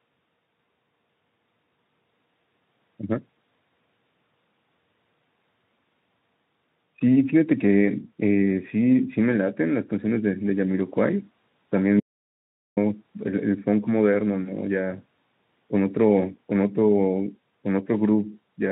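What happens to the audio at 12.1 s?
An audio dropout to silence runs from 12.00 to 12.77 s, about 0.77 s. The speech cuts abruptly to silence with no room tone and then resumes mid-flow. The input was likely lost while recording continued writing zeros, so that stretch is gone.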